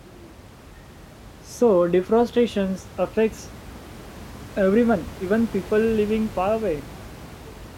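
No technical faults are present in the speech, and the background noise of the room sits about 19 dB beneath it.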